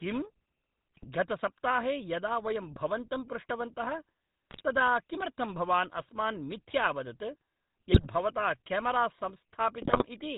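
From the start, the speech has a buzzy, gravelly roughness and a dull top with nothing above 4 kHz. This is the GSM full-rate codec, which fits a 13 kbps stream. It rebuilds the voice from a vocal-tract model excited by sparse, evenly spaced pulses, so fine detail becomes grit.

Brief squawks, pops and gargling break in at 0.95 to 1.05 s, at 4.50 to 4.62 s just before "तदा किमर्थं भवान्", at 7.92 to 8.08 s, and at 9.82 to 10.05 s. These are GSM bit errors. Corrupted filter, pitch or gain values warp the spectrum or spike the level across several consecutive frames.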